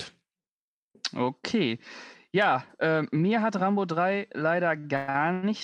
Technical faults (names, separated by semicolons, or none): repeated stalls (stutter)